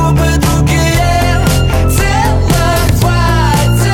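Nothing in the audio stood out as a technical fault on listening.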